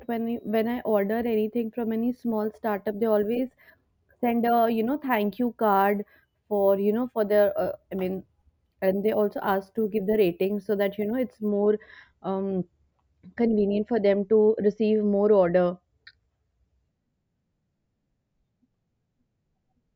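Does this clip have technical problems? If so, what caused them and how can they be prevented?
Yes. From 0.0 to 11.5 s the speech carries imaging from sample-and-hold upsampling: a 16 kHz signal was raised to 48 kHz by repeating samples, leaving mirrored spectra in the 8 to 16 kHz band, about 24 dB down. The result is a metallic fizz that tracks loudness. Prevent it by upsampling with a proper interpolating low-pass filter.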